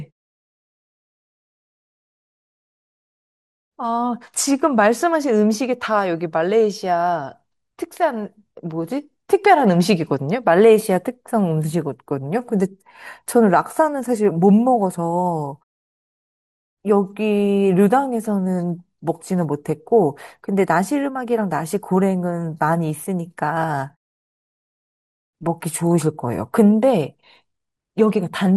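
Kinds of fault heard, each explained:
MP2 compression: throughout, the speech sounds dull, with plainly audible gurgling, granular roughness as upper bands flicker in and out. The likely cause is MPEG Layer II coding short of bits, fitting roughly 80 kbps, which drops high sub-bands and coarsely quantises the rest.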